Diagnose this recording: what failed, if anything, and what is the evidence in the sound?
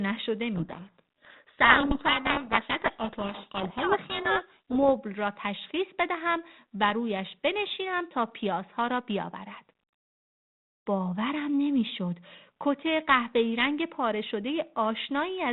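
The failure is at the codec stage, a codec payload misread: from 0.54 s to 4.9 s the speech is buried under harsh, grinding distortion, which points to the decoder reading G.726 code words with their bit order reversed. Unlike low-bitrate ADPCM hiss, it starts and stops abruptly, leaving only the light coding damage of 32 kbit/s G.726 after 4.9 s.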